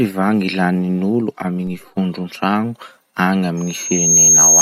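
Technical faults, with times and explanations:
1.67 s, DC step: right after "lanin'olo amy" the waveform's zero line jumps by about -30 dBFS in a single instant, so you get a low thump, a bit like a click with some weight to it, while the speech carries on unaffected. The offset doesn't hold. It slides back toward zero the way a very low high-pass around 2 Hz would pull it back, so there's no second click, just that one knock when the baseline shifts.
3.57 to 4.62 s, loudspeaker feedback squeal: a single tone at about 6.5 kHz starts creeping in and takes roughly 0.7 s to swell into a piercing squeal, ending up something like 10 dB above the speech and running to the end of the clip. That's the mic hearing its own loudspeaker, with the loop gain going above one at that frequency. The tone keeps feeding on itself as it builds.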